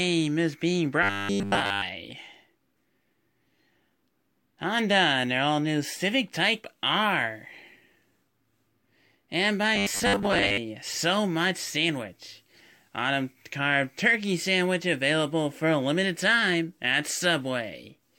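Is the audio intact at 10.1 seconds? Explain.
No, 10.1 seconds falls inside a stretch of robotic sound from repeated short buffers running from about 9.76 to 10.58 s. The speech turns into a stiff, metallic buzz pinned at 100 Hz, though it still loosely tracks the words. That pitch suggests a roughly 10 ms chunk being replayed over and over, likely because fresh audio wasn't arriving fast enough, so most of that stretch is repeats while the real audio gets skipped.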